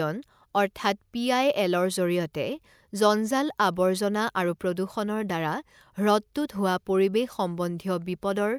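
Nothing in this speech recording stands out as a technical fault; there's nothing that needs flagging here.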